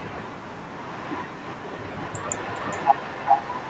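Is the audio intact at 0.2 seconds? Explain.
Yes, at 0.2 seconds the speech is intact, with no fault to be heard at that moment.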